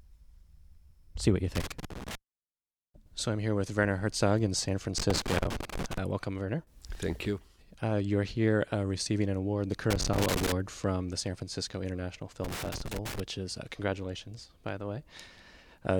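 Loose connector crackle breaks into the sound four times: from 1.55 to 2.15 s, 4.98 to 5.98 s, 9.90 to 10.52 s and 12.43 to 13.20 s. A worn or dirty contact is making and breaking as it shifts, chopping the signal. Unlike evenly spaced digital clicks or clean dropouts, each burst is ragged and scratchy, with irregular spacing inside it, and lasts roughly half a second to a second.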